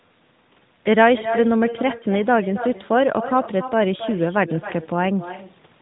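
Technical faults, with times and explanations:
Throughout, echo with no canceller: every phrase returns roughly 300 ms later as a quieter copy, about 12 dB below the direct sound, thinner because it has played through the far end's loudspeaker and been picked up again by its microphone with nothing removing it. On a waveform each burst trails a smaller duplicate. On a spectrogram a fainter replica of each pattern sits just to the right, within the narrowband limit near 3.8 kHz.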